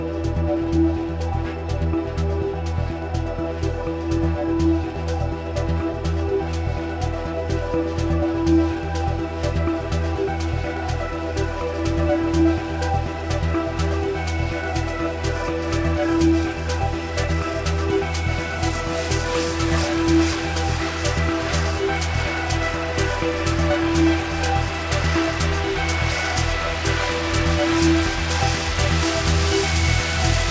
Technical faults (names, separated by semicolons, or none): none